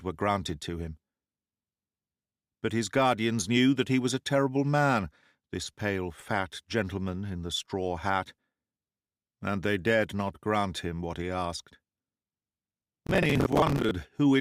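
The processor fell behind from 12.72 to 13.91 s, missing buffer deadlines again and again over about fifty short buffers of around 10 ms. Each miss replays a scrap of old audio with hard edges, so this processor overload crackle tears gritty static through the sound until the load eases.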